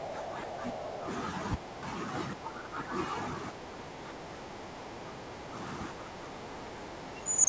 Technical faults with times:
0.00-0.09 background gated by the echo canceller
0.09-0.79 other side's voice leaking through
0.79-1.02 background gated by the echo canceller
1.57-1.85 background gated by the echo canceller
2.35-2.92 background gated by the echo canceller
3.67-4.02 background gated by the echo canceller
4.60-4.78 background gated by the echo canceller
7.24-7.49 speech suppressed in double talk

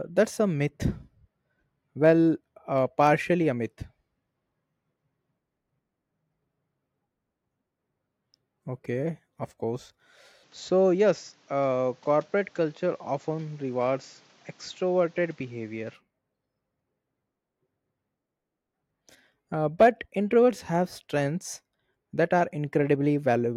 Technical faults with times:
10.43-15.94 input switched to a poorer device

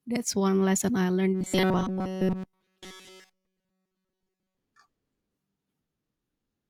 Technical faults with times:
1.34-4.57 robotic sound from repeated short buffers

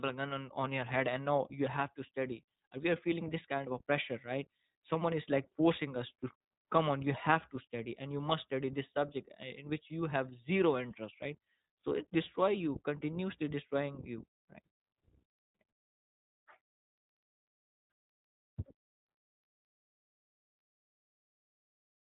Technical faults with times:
0.00-22.12 iLBC codec

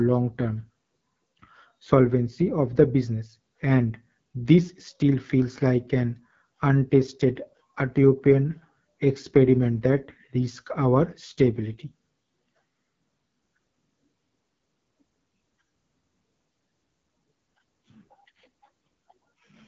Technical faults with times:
0.00-19.67 AMR wideband (HD Voice) codec

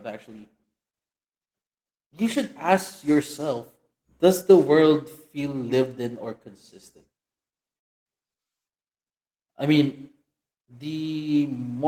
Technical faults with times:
7.77-8.07 long network dropout

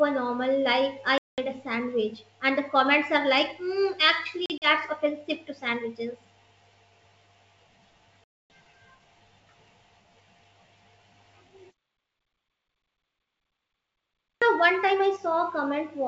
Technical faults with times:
1.18-1.40 packet loss on an ADPCM call
4.46-4.67 packet loss on an ADPCM call
8.24-8.50 packet loss on an ADPCM call
14.37-14.42 clipped start after a pause

